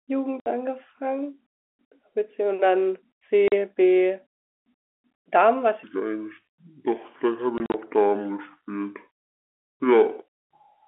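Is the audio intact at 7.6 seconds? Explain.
No. From 7.58 to 7.74 s there is packet loss filled with silence. About 80 ms of sound is missing, scattered across 160 ms, with the longest gap 40 ms. That fits four lost 20 ms packets replaced by silence. The gaps chop the sound with hard edges.

This moment also sits inside a section at the wrong speed, running from 5.83 s to the end. It plays at 0.621 times normal speed, so it drops about seven semitones and drags. The likely cause is playback against the wrong clock.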